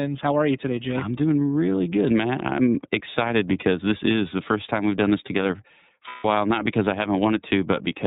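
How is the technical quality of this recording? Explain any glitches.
The technical quality is limited by narrowband codec processing throughout, with one short dropout near the end.

The iLBC codec runs for the whole clip. It codes each frame's excitation independently, in what sounds like 30 ms frames at the codec's lower bitrate, and passes nothing above 4 kHz. The speech is muffled and plainly rough and synthetic.

Lost iLBC frames occur from 6.08 to 6.25 s, between "we've done this together" and "while not because I". For about 150 ms the decoder repeats the last pitch cycle mixed with noise, producing a held, buzzy vowel before the speech snaps back cleanly.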